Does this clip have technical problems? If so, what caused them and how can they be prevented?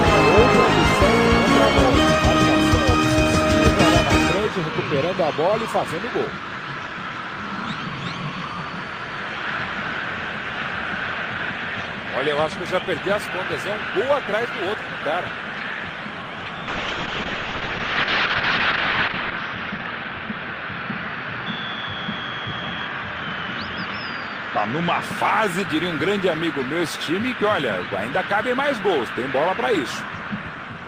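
Yes. From 16.73 to 25.08 s the sound turns rough and muffled above 6 kHz: a call bitrate drop, pointing to encoding cut from 32 to 6 kbps. A more stable network connection with enough bandwidth headroom would prevent it.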